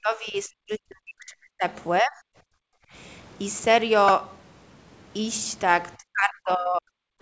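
From the start to 1.64 s, the speech sinks by roughly 40 dB, then returns. It sinks again from 2.01 to 2.31 s and from 5.98 to 6.92 s. This is speech suppressed in double talk. The likely cause is the far side talking at the same moment, so the echo canceller could not tell this talker from loudspeaker echo and turned everything down. What sets it apart is that the talker's own voice is cut, in long stretches of up to about 1.5 s.

From 2.59 to 2.92 s, the room sound itself drops by about 39 dB for roughly 0.3 s and then comes back. This is background gated by the echo canceller: the canceller clamped the microphone while the loudspeaker played. Unlike the double-talk cuts, this is a short hole in the ambience rather than in the voice. Across all of these, the band stops at 8 kHz, which fits the G.722 call path at 64 kbps.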